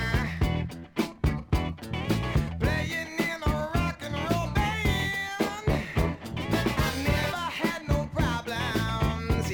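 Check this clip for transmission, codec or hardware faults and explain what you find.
Nothing here stands out as a problem; the audio comes across steady and intact all the way along, with no faults to point to.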